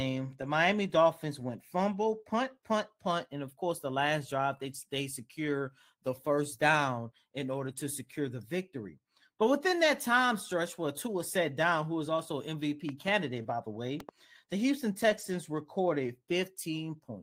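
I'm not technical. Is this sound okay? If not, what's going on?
No. Lost packet rebuilt from error correction at 4.71–4.77, 7.51–7.85, 9.83–9.85, 13.33–13.51 and 15.09–15.35 s: missing bits of speech were filled in from a rougher backup copy, so those moments sound noisier, not silent.

Loud pop at 12.89–13.10 and 14.00–14.11 s: each time, two sharp pops over the speech, likely from a sudden electrical jolt such as a plug, switch or static.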